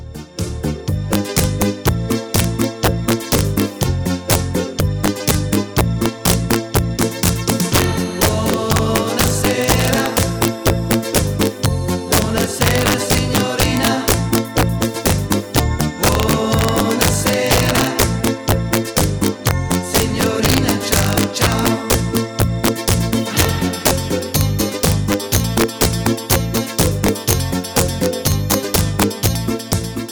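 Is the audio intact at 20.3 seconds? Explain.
No. At 20.3 seconds the audio carries the integer overflow that runs through the whole clip. The signal is driven about 4 dB past the integer ceiling, and instead of being held at the limit, every peak that crosses it wraps round to the opposite extreme of the range. Only around one percent of samples go over, so the damage comes as sudden, violent cracks on loud moments. Clipping would sound flattened and buzzy, whereas these full-scale jumps are far harsher and much sharper.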